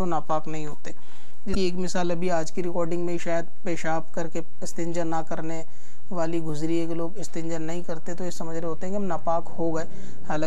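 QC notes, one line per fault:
throughout: DC offset. The entire waveform sits shifted off the zero line by a constant amount, so it no longer swings symmetrically about centre. The shift makes no sound of its own, but it eats into the available headroom on one side, bringing clipping closer on peaks in that direction, and it appears in analysis as a fixed component at 0 Hz beneath the audio.
1.52–1.55 s: damaged data in a compressed stream. For roughly 30 ms the decoder was fed corrupted bytes in the encoded stream, so it misread or discarded the frames there and had to hunt for the next valid frame header before regaining sync. The result is a brief glitch where the reconstructed audio departs from the intended signal.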